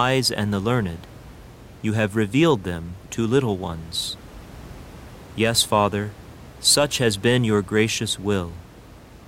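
Speech recording with no technical faults, the only background being the room's own ambient noise, which sits about 21 dB below the speech.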